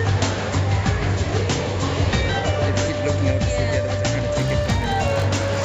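From 4.36 s to the end, a resampler restarted on every block colours the sound with a rough 50 Hz buzz. The conversion from 16 kHz to 48 kHz was run on each 20 ms block separately, so each block edge lacked its true neighbouring samples and picked up a small error, fifty times a second. Unlike mains hum at the same rate, this buzz rides only on the signal and vanishes whenever the sound does.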